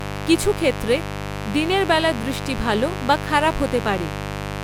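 From start to finish a steady, raspy buzz sits under the speech, loud at roughly 10 dB below it. This is mains buzz: sharp switching spikes at twice the 50 Hz mains rate leak in, spreading harmonics up through several kilohertz.

Throughout, the speech also sounds swirly, smeared and hollow, with softened consonant attacks, and the spectrum stops at 19.9 kHz. This is likely generation loss: around four successive MP3 encodes at a moderately high bitrate, each requantising on a shifted frame grid so artefacts accumulate.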